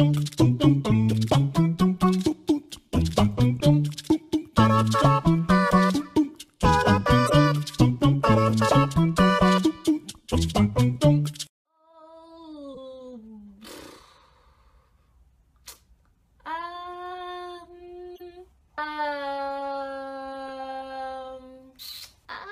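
Corrupt frame decoded events occur at 0.90–0.95, 3.60, 6.01–6.04, 7.26–7.32, 12.74–12.78, 15.73–15.76, 18.15–18.21 and 20.48 s. Damaged compressed frames were decoded anyway, misplacing energy in frequency for a frame or two. Each is a short chirp or noise blip, loudest near 7.3 s.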